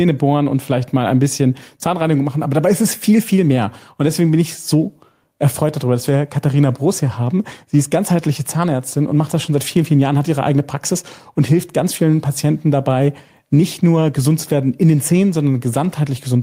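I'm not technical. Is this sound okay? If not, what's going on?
No. The recording level was likely set far too high, so an automatic level control keeps yanking the volume down whenever something loud happens, then letting it creep back up. This is called gain pumping, and it runs through the whole clip. Everything feels squashed and unsteady rather than natural.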